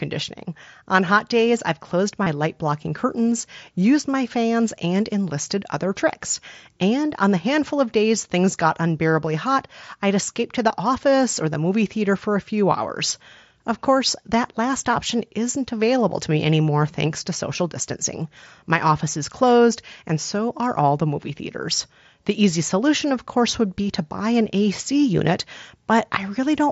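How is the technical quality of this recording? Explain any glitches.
The recording was made through a Bluetooth headset, which limits the speech to 8 kHz with light grain on loud sounds, and it has three brief dropouts.

Concealed Bluetooth headset packet loss occurs at 2.24–2.26 s (after "hot days I've closed"), 3.42 s (before "used my fans and") and 10.69 s (after "hot I'd escape to"). Lost packets, about 22 ms and 15 ms, were bridged by repeating matching recent waveform, causing brief buzzy blips.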